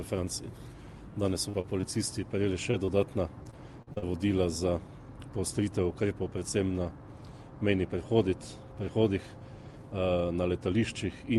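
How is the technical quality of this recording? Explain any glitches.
The recording has two kinds of network glitch in the first four seconds, both from audio that didn't arrive in time. The call-codec path tops out around 12 kHz, which fits Opus at roughly 48 kbps.

Short concealed packet loss happens at 1.49, 1.61, 1.81, 2.71 and 2.85 s. Each hole is about 20 ms long, except the first at about 40 ms. The receiver covered each gap by stretching the sound just before it, then blended back into the real signal. You hear quick little smears or wobbles, and a very short sound could drop out entirely.

Repeated packet loss (robotic sound) runs from 3.43 to 4.04 s. There are five gaps close together, the longest about 44 ms, and roughly a quarter of that stretch is patched-in audio. The concealment never gets a chance to settle before the next hole arrives, so the passage turns choppy, with fragments of the sound missing.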